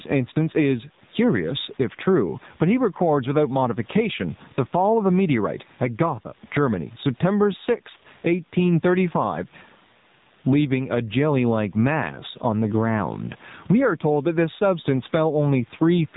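From start to finish, the level is pulled down under each loud syllable, a gain swing of roughly 15 dB. Loud and quiet passages sit unnaturally close in level and the speech sounds squashed. This is gain pumping, likely caused by the input gain being set far too high for the microphone, so that a fast limiter or compressor clamps down on every peak and releases in the gaps.

Also present throughout, the speech is dull and boxed-in, with nothing at all above 4 kHz. The voice has a buzzy, synthetic edge, and the background turns into a swirling warble. These are the marks of the AMR narrowband mobile codec at a low rate, which fits its 7.4 kbps mode. The codec samples at 8 kHz and rebuilds each short frame from a vocal-tract model driven by a few pulses, so fine detail and non-speech sound are lost.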